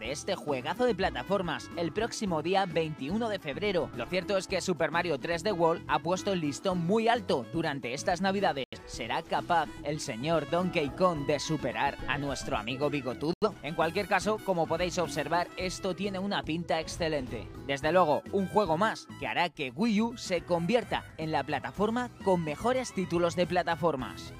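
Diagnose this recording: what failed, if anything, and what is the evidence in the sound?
The failure is a digital broadcast dropout at the reception and decoding stage, heard twice: a hole from 8.64 to 8.78 s and another from 13.33 to 13.48 s. Each time the sound goes abruptly silent for about 0.14 s, then resumes further on, so the missing material is simply gone. That fits a decoder muting after roughly two frames failed their checksum. Unlike a loose analogue connection, there is no crackle or hum at the edges.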